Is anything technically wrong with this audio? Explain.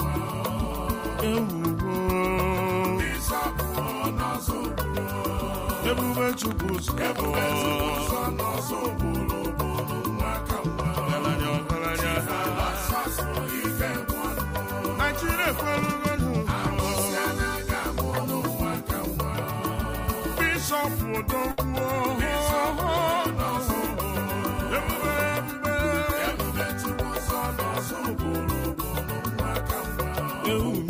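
Yes, two things. From 6.33 to 8.08 s there's a train of clicks, about 11 per second at a steady pace, roughly twenty in all, peaking around 10 dB above the audio. It's a regular ticking over everything, likely from interference or a faulty connection.

At 21.51 to 21.60 s there's a burst of packet loss. The receiver filled about 61 ms by stretching the last sound and fading it out, so you hear a brief held, dying tail. Then playback picks up about 60 ms further on, with that stretch gone.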